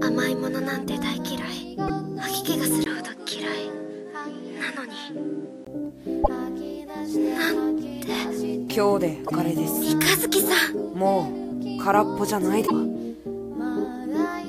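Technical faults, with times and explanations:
1.84 to 1.90 s, 6.21 to 6.29 s, 9.24 to 9.32 s and 12.63 to 12.71 s: damaged data in a compressed stream. Each is a short glitch lasting roughly 60 to 80 ms. Corrupted bytes made the decoder misread those frames and lose sync, so it garbled briefly and skipped ahead to the next clean frame header.
2.84 to 5.67 s: input switched to a poorer device, likely the recorder jumping to a different microphone. A 20 ms gap marks the switch. Then the top end vanishes above 11.4 kHz, and a new noise floor sits roughly 35 dB under the signal at about the same level. It snaps back afterwards.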